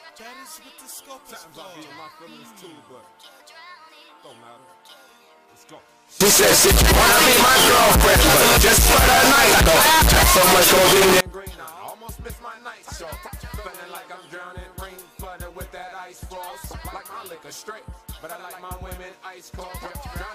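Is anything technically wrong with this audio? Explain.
Yes. From 6.21 s to 11.21 s the sound abruptly becomes extremely loud and harsh, with the background noise as loud as the main signal. The cause is likely a float read as integer: 32-bit float samples interpreted as 32-bit integers, so the sign and exponent bits decide each value. On a waveform that stretch appears as a near-square block sitting at an almost fixed, high level. A spectrogram shows dense broadband energy filling every frequency, with the original pitch contour still traceable.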